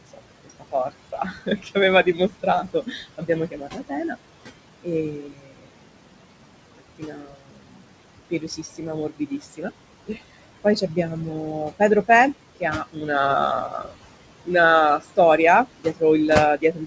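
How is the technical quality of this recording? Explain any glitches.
The recording suffers from heavy noise suppression that both colours the background and eats into the speech.

Noise suppressor artifacts run through the whole clip. The suppressor pulls the room noise down by about 21 dB, frame by frame, wherever it judges the bands to be steady noise. The remnant sinks between the words and rises under them. Unlike a plain gate, the noise never fully vanishes; it pumps.

Speech cut by the noise suppressor affects three stretches: 0.13 to 4.16 s, with about 19 dB at its deepest and roughly a second and a half of speech affected; 4.83 to 13.09 s, with about 22 dB and around four seconds affected; and 13.67 s to the end, again about 22 dB. Here the suppressor mistakes soft consonants and word endings for noise, so they sound swallowed or faint. The damage falls on the speech itself rather than on the background.

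The room noise sits about 12 dB under the speech and belongs to the recording. The bandwidth stops at 8 kHz, which points to a wideband G.722 call path.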